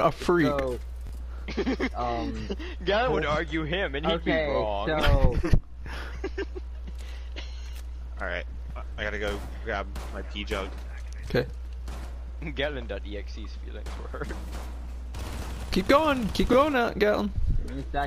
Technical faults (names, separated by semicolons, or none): repeated buffer